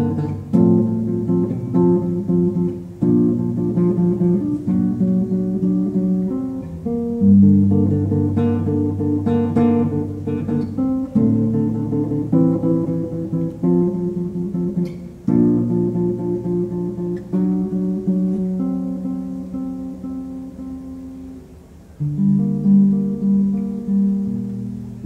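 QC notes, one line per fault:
25.03 s, damaged data in a compressed stream. A brief blip sounds right at the tail of the audio, lasting about 14 milliseconds. Part of the compressed data here is corrupted, so the decoder misreads the affected frame and loses its place. It then hunts forward for the next valid frame header. The misread data comes out as a short glitch. Because it falls at the very end, almost nothing follows it.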